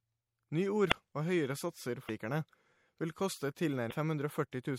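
Throughout, the speech sounds watery and swirly with dulled treble, likely MP3 compression at a low rate such as 64 kbps, not a plain low-pass filter. Damaged data in a compressed stream causes brief glitches at 0.88–0.93 s, at 2.05–2.10 s just after "høyere satser", and at 3.88–3.93 s, each where the decoder misreads frames and loses sync.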